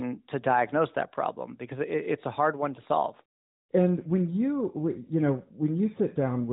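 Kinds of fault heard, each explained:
No faults found in this speech; the only coloration is the narrowband mobile codec path, cut off near 3.8 kHz with light codec damage consistent with AMR-NB at 12.2 kbps.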